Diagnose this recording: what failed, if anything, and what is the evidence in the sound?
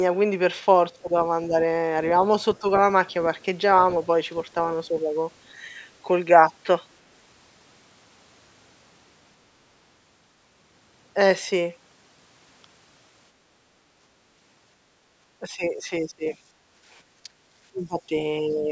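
The failure is in call processing, specifically the echo canceller. The voice keeps getting ducked. Early on there are brief dips at 1.03–1.10, 1.48–1.54 and 2.60–2.66 s, each lasting a fraction of a second and fairly shallow, a few dB up to maybe 10 dB. Later it gets worse: 15.39–16.36 s, 17.23–17.30 s, 17.71–18.14 s and 18.41–18.71 s, with the drops reaching around 10 to 20 dB. That pattern is most likely speech suppressed in double talk. The canceller can't tell the local talker apart from far-end echo, so it pulls both down.

In the same stretch, the background gated by the echo canceller shows up at 16.64–16.85 s. The room tone drops by about 9 dB for roughly 200 ms and then comes back, which is the suppressor clamping the mic while the loudspeaker was active and releasing when it let go. The top end stops around 8 kHz, and that comes from the ordinary call microphone path, not from this fault.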